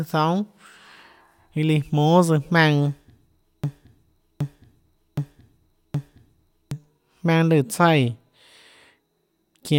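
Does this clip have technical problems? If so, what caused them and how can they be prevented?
Yes, there's a broken-record loop in this speech clip from about 3.64 s to 6.71 s. A chunk roughly 0.77 s long plays four times back to back, identical each pass, so whatever should have come through in those three seconds is simply gone. That's likely a stall in the player, encoder or stream, which kept re-sending the last fragment it had. To prevent it, give the pipeline enough buffering and have it output silence on underrun rather than replaying old data.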